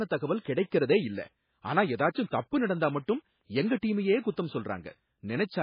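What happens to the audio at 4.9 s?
At 4.9 s the speech still carries MP3 compression, as it does throughout: nothing above 5 kHz, plus watery, swirling artefacts that a plain low-pass filter wouldn't cause, likely from a very low bitrate around 16 kbps.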